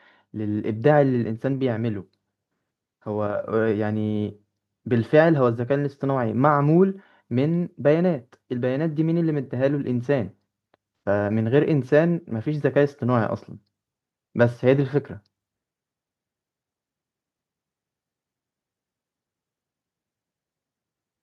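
From 0.33 to 3.47 s, automatic gain rising lifts the level by about 4 dB. The gain control found the speech too quiet. Voice and background swell together.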